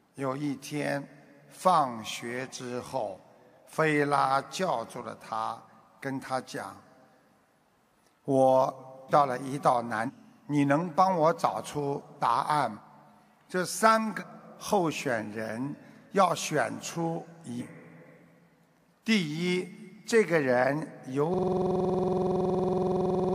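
Whole frames of the compressed audio were lost or rejected by the decoder, so compressed frames are skipped at 9.08, 10.06, 12.75, 14.19 and 17.58 s, each jumping ahead roughly a third to two-thirds of a second. From 21.34 s to the end, the system hung while the sound hardware kept cycling its ring buffer. This system hang loop repeats one 46.4 ms piece, which fits a 2048-sample buffer, about 43 times, looping at 21.5 Hz.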